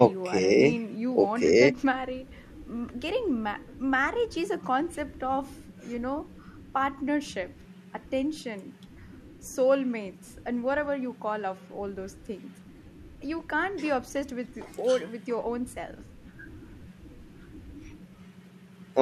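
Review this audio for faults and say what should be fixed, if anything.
Nothing here needs fixing, as the speech comes through without any fault to point to.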